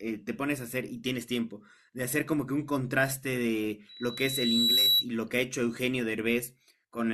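At 3.89 s a loudspeaker feedback squeal starts: the microphone is re-amplifying the loudspeaker it drives, and at 3.9 kHz the loop gain passes unity. The pure tone swells over about a second, rising a little above the speech before stopping at 5.06 s.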